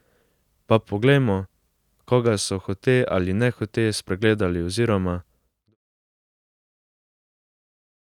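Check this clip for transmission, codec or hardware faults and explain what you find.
Nothing here points to a transmission, codec or hardware fault; the only change you'll notice is the speech easing out in a smooth, deliberate fade that begins around 5 seconds and is complete by 5.76 s, with no click or hard edge.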